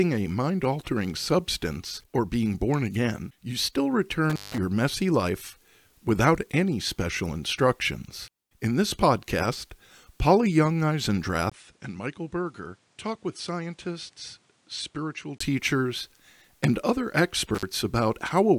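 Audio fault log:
4.30–4.58 s and 17.55–17.65 s, intermittent contact: the sound drops out for about 165 ms, then 48 ms, with crackle at each edge, like a loose plug.
11.50–15.40 s, input switched to a poorer device: after a 20 ms gap the audio goes dull, with nothing above 10.5 kHz, a level drop of about 10 dB and a new noise floor around 35 dB down. This is likely a change to a weaker microphone.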